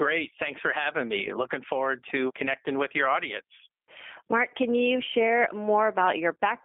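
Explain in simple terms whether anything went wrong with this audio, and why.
G.729 codec, throughout the clip: this phone codec rebuilds speech from a simplified voice model, so it sounds rough and synthetic, with nothing above 3.5 kHz.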